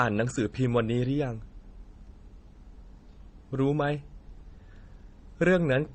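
Throughout the speech, nothing sits above 8.7 kHz, and two layers of coding damage are audible together: the earlier codec's artefacts plus the later codec's own. This is transcoding between lossy codecs, likely a low-bitrate MP3 re-encoded to HE-AAC, with the second encoder spending bits on the first one's artefacts.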